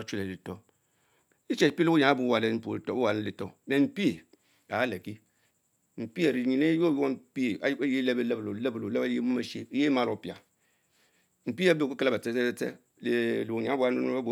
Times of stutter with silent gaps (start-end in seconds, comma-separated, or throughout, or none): none